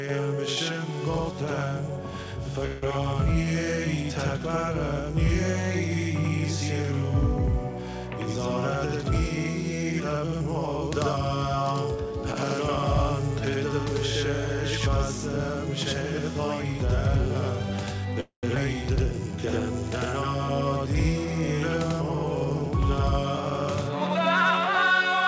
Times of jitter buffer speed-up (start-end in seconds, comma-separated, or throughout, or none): 9.00-11.38, 21.24-22.67